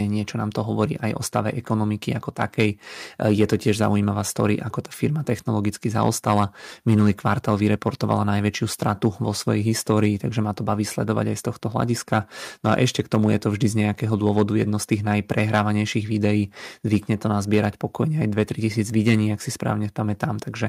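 At 2.41 to 2.63 s after "o stave ekonomiky ako", 6.02 to 8.13 s after "ako tá firma technologicky", and 14.38 to 15.6 s after "to vždy z nejakého", speech peaks flatten with a harsh crackle, likely microphone overload. Loud syllables exceed the converter's limit by about 3 to 4 dB, clipping a small fraction of samples.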